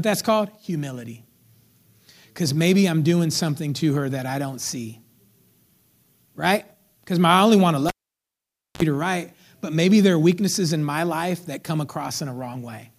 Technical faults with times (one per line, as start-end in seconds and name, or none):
7.89-8.83 cable pulled and plugged in